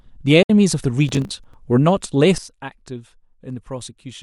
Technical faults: digital broadcast dropout; processor overload crackle; sudden gain jump

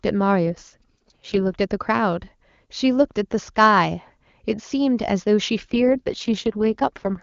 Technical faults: AMR rate drop

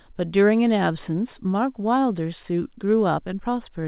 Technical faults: none

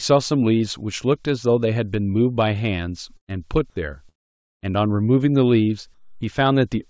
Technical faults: burst of packet loss; long network dropout; comfort noise in place of the background

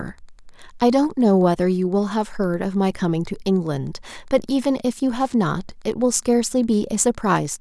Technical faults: Wi-Fi interference

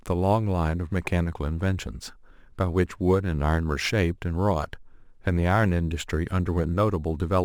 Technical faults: crude rate conversion

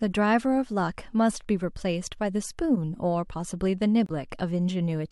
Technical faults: corrupt frame decoded

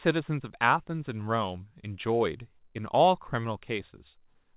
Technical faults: none

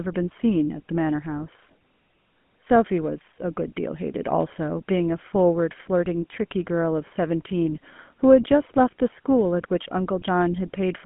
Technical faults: GSM full-rate codec

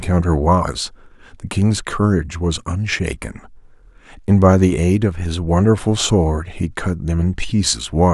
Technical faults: none

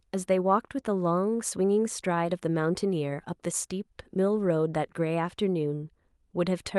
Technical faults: none

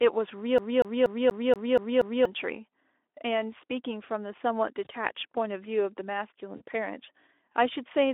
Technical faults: CD stuck on one turn; VoIP packet loss concealed by the speech codec

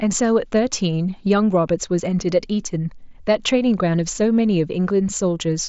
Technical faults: none

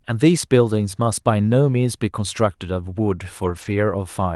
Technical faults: lost packet rebuilt from error correction

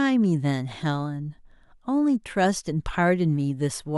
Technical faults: none

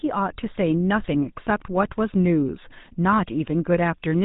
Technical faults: GSM full-rate codec

